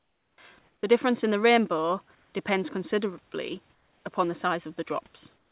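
Speech clip with comfort noise in place of the background at 0.00–0.38 s, 0.59–0.83 s, 2.15–2.33 s (between "difference in the rainbow" and "depends considerably upon the"), 3.74–4.04 s (between "the rainbow depends considerably" and "upon the"), and 5.36 s to the end. The room's real background is swapped for steady, featureless hiss, about 11, 2, 4 and 5 dB quieter in four of the gaps and about 3 dB louder in the second, likely from discontinuous transmission filling pauses with synthetic noise. Onset clipped by the voice detector at 0.34–0.38 s and 0.81–0.83 s: the first 40 ms and 20 ms of sound are missing, so each entry starts abruptly, likely because the detector reacted late and comfort noise covered the gap. The call path's band limit, with nothing above 4 kHz, fits G.711 at 64 kbps, and room noise sits about 41 dB below the speech.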